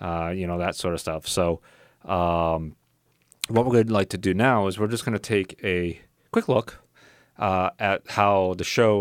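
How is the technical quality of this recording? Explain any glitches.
The technical quality of this recording is sound, with no glitches to explain.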